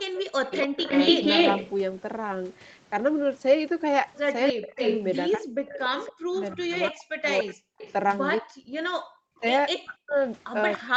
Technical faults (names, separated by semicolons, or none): speech suppressed in double talk; echo leak